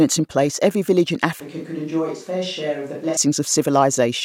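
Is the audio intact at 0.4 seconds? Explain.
Yes, the audio is intact at 0.4 seconds, with no dropout, click, distortion or other fault to be heard there.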